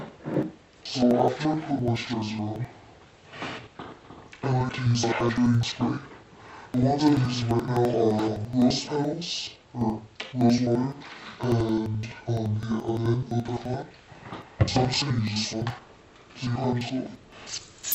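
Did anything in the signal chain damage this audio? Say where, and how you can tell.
Yes. Interleaved audio read as planar, at sample-format conversion, throughout. Sound plays an octave low, doubled, choppy at 11.7 Hz, which fits 4096-sample blocks.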